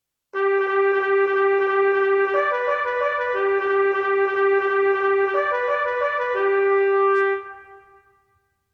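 No technical faults are audible.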